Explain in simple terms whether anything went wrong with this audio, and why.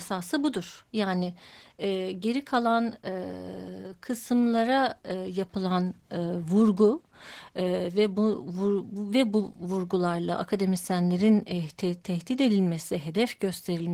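The speech was squeezed hard by Opus voice compression for the whole clip, from start to finish. To save data, the encoder models the voice with a simple prediction scheme and adds only a thin layer for the high frequencies. The fine detail of the voice gets coded coarsely. You can plainly hear the result: the speech sounds muffled and hoarse, with a slightly robotic edge, rather than clear and natural.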